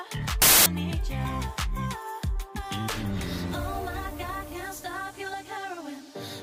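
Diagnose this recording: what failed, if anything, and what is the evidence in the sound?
The fault sits in sample-format conversion. From 0.42 to 0.66 s the sound is replaced by a burst of loud, harsh broadband noise, then returns cleanly. This is samples built from the wrong bytes. The reader misassembled each sample, either shifted by one byte or with the byte order swapped. The rapidly changing low-order bits ended up as the most significant part of each value. That turns the signal into broadband hiss at high level for about a quarter of a second.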